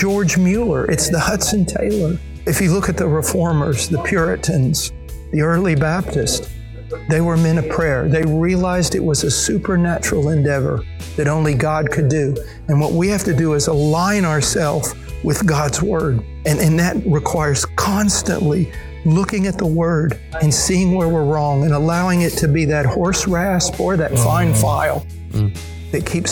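The audio was joined from 10-second chunks with a short silence left at each join. That creates a gap between chunks of about 6.5 ms at 8.23 s and again at 18.23 s, heard as two brief holes exactly ten seconds apart.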